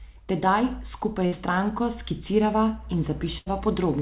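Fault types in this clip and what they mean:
burst of packet loss: brief held, fading smears at 1.26 s, before "s stranko skicirava", and 3.38 s, where the receiver concealed about 60 and 80 ms of lost packets.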